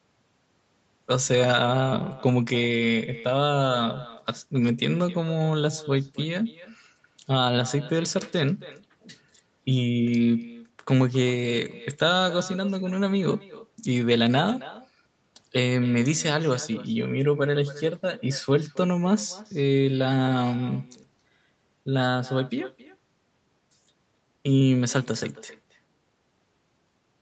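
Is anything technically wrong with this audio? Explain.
Yes. Throughout the speech there is echo with no canceller: the far end's loudspeaker feeds its microphone and nothing removes it, so each phrase returns roughly a third of a second later, about 18 dB quieter, as a thin shadow over the 8 kHz-limited call audio.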